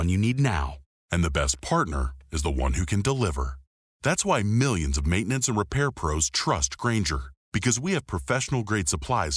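From 0.76 s to the end, a wrong sample rate slows the speech to about 0.92 speed. Pitch drops about 1.5 semitones, consistent with 24 kHz audio played at 22 kHz.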